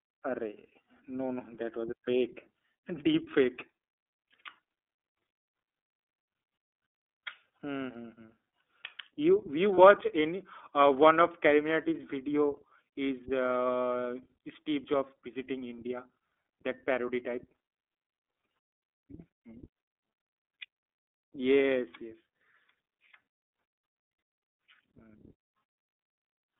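Throughout, the speech carries the signature of the iLBC codec: nothing above roughly 3.6 kHz and little below 300 Hz, with a plainly rough, synthetic edge to the voice. The coarseness fits the 13.33 kbps mode with 30 ms frames. Unlike wideband codecs, the top end is simply absent.

From 9.75 to 9.78 s, just before "any uh", comes a lost iLBC frame. The decoder filled the roughly 30 ms gap by repeating the last pitch cycle with added noise, heard as a brief buzzy, held vowel. Because each frame stands alone, the voice recovers immediately, with no lingering smear afterward.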